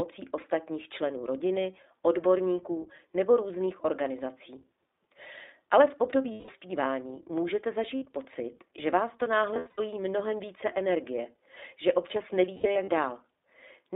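From start to finish the speech sounds boxed-in and faintly rough, with a slightly synthetic edge and nothing above about 3.7 kHz or below about 300 Hz. That is the iLBC codec, a narrowband VoIP coder that encodes each 20 ms frame's excitation independently and throws away the upper spectrum. The audible graininess fits its 15.2 kbps mode.

Four times the speech turns into a brief held, buzzy vowel. These are lost iLBC frames. When packets go missing, the decoder repeats the last pitch cycle blended with noise, then snaps back almost immediately because each frame stands alone. The first gap, from 6.32 to 6.51 s, lasts 160 ms, which fits eight lost 20 ms frames. The second, from 7.96 to 8.04 s, is a shorter 60 ms dropout just before "pocit že vás to". Between 9.54 and 9.80 s, after "pocit že vás to" and before "mnohem více energie že", 180 ms of loss is scattered across 240 ms, with the longest run around 70 ms. 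From 12.56 to 12.90 s, after "více energie že občas", another 180 ms is scattered over 320 ms, again with the longest run around 70 ms.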